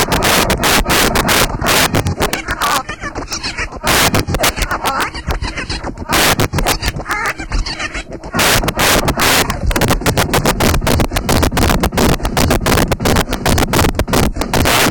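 Integer overflow runs throughout: pushed about 9 dB too hot, roughly 7 percent of samples wrap to the opposite extreme, giving violent cracks, sharp spikes on the waveform and broadband vertical streaks.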